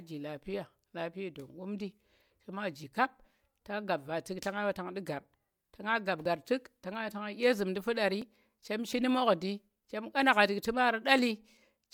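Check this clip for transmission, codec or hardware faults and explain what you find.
Two faults of one kind are present: overlap between stream segments. The first is a tiny skip at 6.26 s, just before "tu̱k to nga ɓa". The second runs from 8.22 to 8.24 s, between "zu̱mndi fu̱ɗar" and "chem shi nu̱ mu̱dndi". Where adjacent 2-second segments claim overlapping time, the player discards the overlap, removing about 9 ms and then about 26 ms of genuine speech, and the waveform jumps. Unlike a dropout, there is no silent gap, only missing sound.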